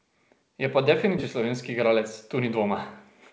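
At 1.18 to 1.20 s a skip ahead drops about 0.7 s of speech with no fill, so playback jumps forward and both sides join almost directly. From 1.42 to 1.99 s a jitter buffer speed-up trims a few tens of milliseconds in pitch-period pieces, making speech run about 6% faster at unchanged pitch.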